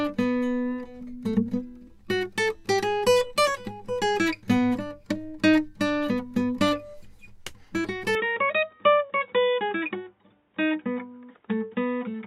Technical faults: input switched to a poorer device

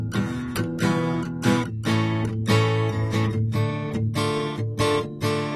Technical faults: AAC compression

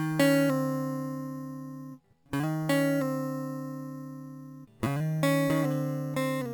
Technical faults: imaging from sample-and-hold upsampling

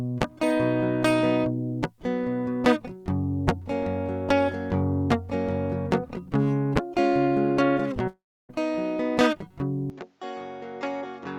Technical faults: long network dropout; input switched to a poorer device

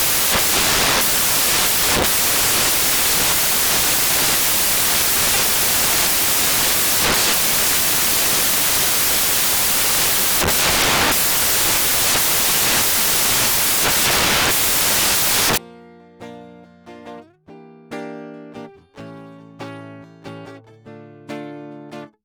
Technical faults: samples built from the wrong bytes

